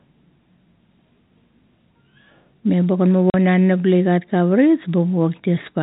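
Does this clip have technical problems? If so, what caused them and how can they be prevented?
Yes. At 3.30 to 3.34 s a run of packets never reached the receiver, and rather than conceal the gap it played silence in their place. This is packet loss filled with silence: the speech drops out completely for 40 ms, which fits four consecutive 10 ms packets, and the cut at each edge is abrupt. The band-limited G.711 telephone sound continues unchanged on either side of the gap. To prevent this, use packet loss concealment and a jitter buffer at the receiver, or add forward error correction on the link.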